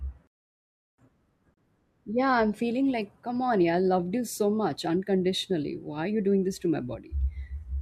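At 1.54 s the speech drops out abruptly for about 31 ms, a short hole of silence with slightly softened edges, before it resumes exactly where it stopped. This is a gap at a join of encoded pieces: the audio was encoded in separate chunks, spaced every 6 s, and joined without trimming, so each encoder's start-up delay and final-frame padding remain as dead air inside what should be continuous sound.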